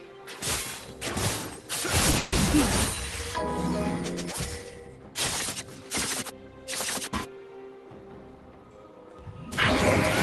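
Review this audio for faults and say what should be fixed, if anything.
At 2.11 to 2.15 s a sound is held slightly too long with a faint buzz or dip. This is a short stall from a late packet: the jitter buffer ran dry, and about 20 ms of the last sound was stretched before playback resumed with nothing lost.

From 2.17 to 2.34 s the last sound continues as a fading buzz or hiss for about 150 ms. This call audio freeze likely came from delayed packets emptying the jitter buffer, which inserted a gap without dropping any audio.

From 8.05 to 9.14 s the audio runs hurried at unchanged pitch, about 112% speed. This is a jitter buffer speed-up: the buffer held more audio than it aims for, so small pitch-period pieces totalling about 150 ms were trimmed to shrink the latency.

Across the whole clip the Opus call path limits the audio to about 12 kHz.

To prevent these faults, reduce network delay variation, or set a larger minimum jitter buffer target so that late packets don't empty the buffer and force a catch-up afterwards.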